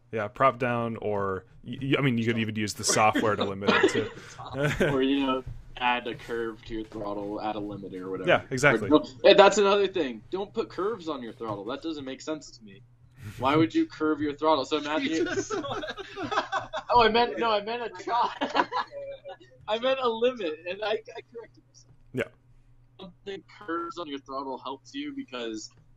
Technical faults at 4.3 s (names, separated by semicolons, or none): none